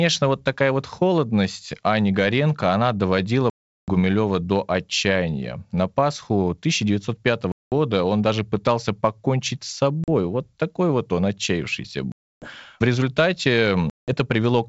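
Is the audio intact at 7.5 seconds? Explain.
No. Packet loss on an ADPCM call silences 7.52 to 7.73 s, roughly ten packets. The decoder's predictor loses sync, so speech resumes at "он даже пытался покончить" with brief distortion.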